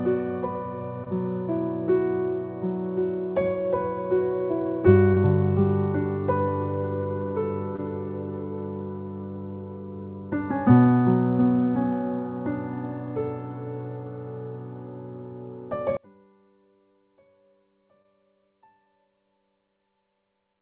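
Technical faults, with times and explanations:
1.04, 5.14, 7.76, 16.92, 18.02 and 18.84 s: short concealed packet loss. Each time about 20 ms of audio failed to arrive in time, and the receiver filled the gap with roughly the same length of synthesised continuation built from the preceding sound before crossfading back to the real signal. Each gap is heard as a tiny smear or wobble rather than silence, and a very brief sound falling in a gap can disappear.
15.97 to 20.61 s: one channel inverted. From 15.97 s the level drops by about 35 dB and stays down to the end, leaving only a faint residue of the sound. The likely cause is one stereo channel flipped in polarity, so that the content shared by both channels cancels when they are summed to mono and only their small differences survive. The band-limited, nothing-above-4 kHz character of the call path, consistent with G.711 mu-law at 64 kbps, carries through this faint remainder.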